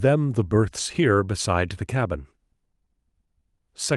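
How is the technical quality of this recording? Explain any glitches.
Nothing in the recording stood out as a technical problem on listening.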